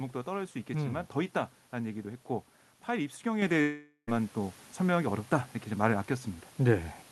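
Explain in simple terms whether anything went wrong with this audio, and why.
Two things went wrong. First, at 3.42 s the call software decided the microphone was too quiet and turned its input volume up in one jump, a microphone volume step-up. The speech and the background noise suddenly get louder together. A second, much smaller step follows at 4.44 s.

Second, from 3.61 to 4.09 s the sound stops in a way that points to a long network dropout, most likely a stretch of audio lost in transit. The receiver fills the gap by stretching out the last sound into a fading buzz, then brief silence, and the speech returns with about half a second missing.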